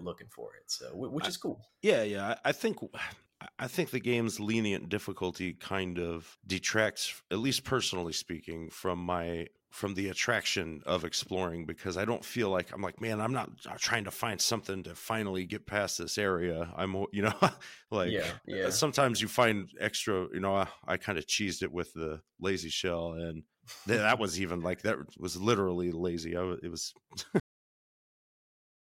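Speech recording with a cut-off end. Just after "lazy I it was", the sound stops abruptly at 27.40 s, mid-sound, with no natural decay. Digital silence follows for the final 1.5 s. The last buffers were never written or played.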